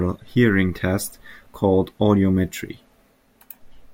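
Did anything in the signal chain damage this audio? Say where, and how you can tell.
No, nothing in this speech recording stood out as damaged by any stage of the signal chain on listening.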